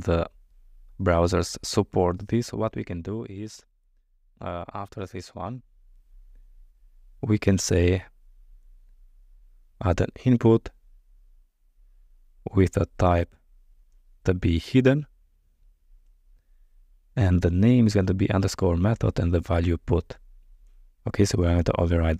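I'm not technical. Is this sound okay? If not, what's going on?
No. From about 1.96 to 3.29 seconds, while the volume is being turned down noticeably, you can hear a fine ticking or buzzy zipping laid over the sound. This is called zipper noise. Instead of gliding down, the volume drops in lots of tiny jumps, roughly 150 each second, and every jump leaves a little click. Packed that closely, the clicks run together into that zipping texture until the volume stops moving.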